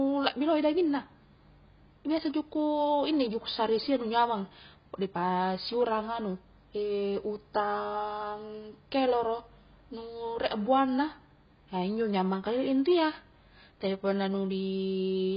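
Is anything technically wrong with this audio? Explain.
Yes. The speech is band-limited and smeared for the whole clip. Nothing is heard above about 5.1 kHz, so sibilants lose their edge and the sound turns dull. The heavy damage is likely from AAC compression at a low bitrate, which fits something near 16 kbps. At that rate the encoder drops the upper band and quantises the remaining frequency lines coarsely. This leaves spectral holes that give sustained sounds a warbling, fizzy texture.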